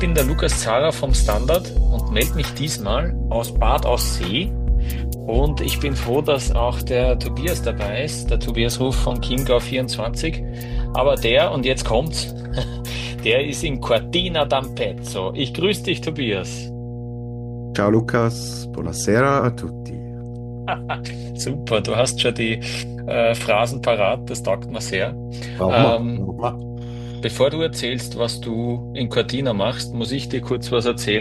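Mains hum at 60 Hz runs through the whole clip, sitting only roughly 10 dB under the audio, so the steady low tone is plainly audible. It points to a ground loop or nearby transformer. A spectrogram shows an unbroken horizontal line at 60 Hz from start to finish.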